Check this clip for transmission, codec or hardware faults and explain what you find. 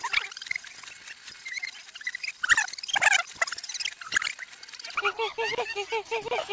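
No transmission, codec or hardware faults turn up in this clip; the call path's usual top end around 8 kHz is as expected.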